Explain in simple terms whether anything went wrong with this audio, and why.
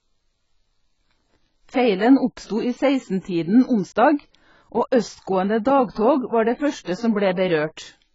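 Something went wrong in the encoding: the audio was most likely squeezed hard by AAC compression, which discards detail to save space. Across the whole clip, nothing above 7.6 kHz survives, so the speech sounds dull and muffled, with a smeared, warbly, fizzy edge.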